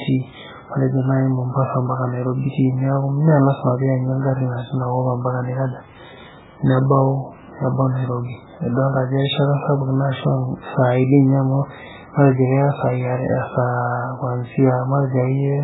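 Speech runs the whole way through with heavy MP3 compression damage, likely from an encode at a very low bitrate, around 8 kbps. Nothing survives above 3.8 kHz, so s sounds lose their hiss and the sound is dull and watery, with swirling where weak frequency lines drop in and out between frames. On a spectrogram there is a flat ceiling at 3.8 kHz and patchy, flickering blocks beneath it.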